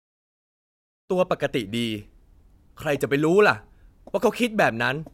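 No faults found in this speech, just a smooth editorial fade-in from around 1 s to 1.13 s with no click or hard edge.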